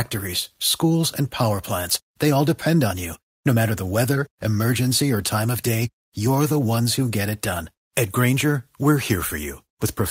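Speech, with clock drift between sender and receiver throughout. The sender's clock runs around four percent fast, so the receiver's buffer keeps overfilling. Repeated timing corrections follow from 0.83 s to 10.02 s. The receiver trims short pieces at uneven intervals, making the speech run at about 105% speed, with faint hiccups.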